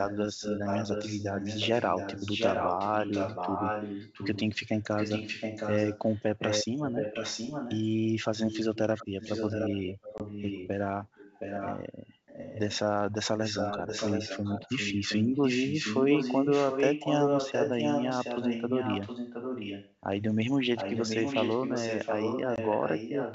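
An echo leak runs through the clip at 0.08–4.59, 4.98–7.87 and 8.47–10.68 s: a delayed copy of the sound trails by about 0.72 s, roughly 5 dB down, likely from a loudspeaker echo canceller letting pickup through. At 10.18–10.22 s, packet loss on the ADPCM call cuts a hard 20 ms hole, and the decoder recovers with slight distortion. The echo returns fainter at 11.15–11.83 s (about 10 dB down) and 12.26–12.79 s (about 15 dB down), then back at about 5 dB down at 13.39–19.94 s and from 20.76 s to the end. A second 20 ms dropout hits at 22.56–22.58 s. The G.722 wideband coding underneath adds only faint hiss.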